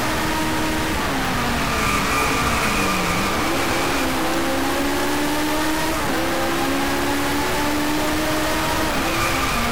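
From start to finish the audio carries a harsh, buzzy distortion that grinds along under everything, and the quieter stretches never fall silent but fill with a gritty noise floor. The likely cause is a stuck bit: one data bit held at a fixed value, pushing roughly half the samples off by a step of around -20 dBFS. Because that bit flips with the sign of small values, even near-silence turns into noise.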